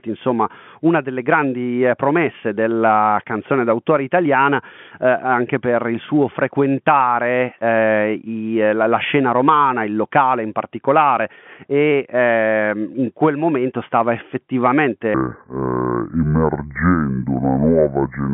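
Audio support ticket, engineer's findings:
Section at the wrong speed, 15.14 s to end of clip (18.34 s). Audio drops to 0.633x speed, pitch falls about seven semitones, tempo and pitch changing together. Likely a playback or editing clock mismatch on that segment. Distinct from a pitch-preserving time-stretch, which slows without deepening, and from a pitch shift alone, which keeps timing. The narrow 150–3400 Hz telephone band from G.711 coding is otherwise working normally.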